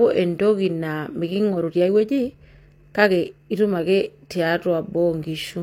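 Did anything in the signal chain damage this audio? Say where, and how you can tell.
Yes, a time-stretched section: processing software likely compressed the audio to fit a length. After "entoki naa", 1.42–3.98 s plays 1.35 times faster, rushed, with the pitch unchanged.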